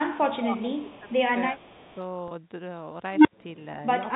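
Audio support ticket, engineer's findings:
Echo leak at 0.00–0.16 s, 0.52–1.13 s, 1.59–1.94 s: faint copy of the speech trailing 343 ms behind, about 25–30 dB down. Likely far-end echo canceller residual. Fixed delay distinguishes it from reverb.

Speech suppressed in double talk at 0.16–1.23 s (dips up to about 15 dB, roughly 0.7 s total) and 1.52–1.57 s (about 5 dB): near-end level pumps while the echo overlaps. Likely the canceller's suppressor ducking both.

Packet loss with pitch repetition at 2.28–2.31 s: brief held, buzzy sustain of about 30 ms, consistent with a single lost packet bridged by repeating the last pitch period. Smooth sustain, not a dropout or click.

Unstable filter at 3.13–3.33 s: tone of roughly 300 Hz swells over about 0.12 s, clips, then 82 ms of silence until reset. Recursive filter blow-up. Runaway growth and hard mute distinguish it from acoustic feedback. The G.711 A-law band limit at 4 kHz applies throughout.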